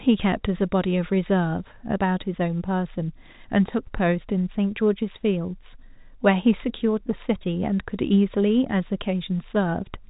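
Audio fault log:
The speech carries the narrow band of ordinary G.711 telephone coding, with nothing above about 3.8 kHz and only the faint, level-following grain that this format always leaves, and no faults are present.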